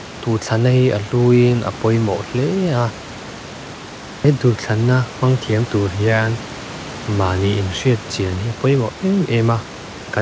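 No technical faults can be heard in this speech recording. Room noise sits about 18 dB below the speech, and the call path's G.722 coding leaves no content above 8 kHz.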